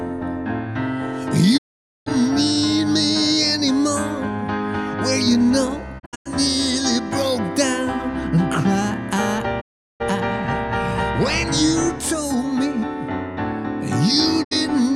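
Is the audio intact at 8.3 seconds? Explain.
Yes, the audio is intact at 8.3 seconds, with no dropout, click, distortion or other fault audible at that point.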